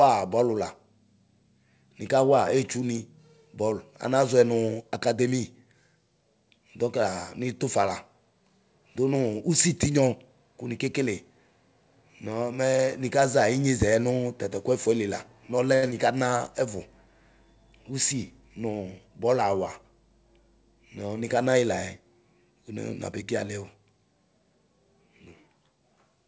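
At 15.75 s, right after "ku ɛfuɛli la nɔluɛ", there is a short stall from a late packet, lasting until 15.95 s. A packet arrived after its playout time and the jitter buffer ran dry. The receiver stretched the last sound by about 76 ms to cover the wait, then resumed where it left off. No speech is lost, but that sound is audibly held too long before "na ɛvu", with a slight buzz or dip as it sustains.

Inside that stall, from 15.90 to 15.93 s, there is also a short concealed packet loss. About 20 ms of audio never reached the decoder. The receiver synthesised roughly 11 ms to bridge the gap by extending the preceding signal, then crossfaded back into real audio. This adds a brief smear or wobble on top of the held sound, just before "na ɛvu" begins.

From 17.79 to 18.99 s a jitter buffer speed-up follows, as the receiver drains extra buffered delay. It repeatedly cut out pitch-period-sized slices, removing around 70 ms in total, so playback runs at about 106% of normal speed with pitch unchanged. 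Over that stretch the speech sounds slightly hurried. The call path, consistent with G.722, carries nothing above 8 kHz.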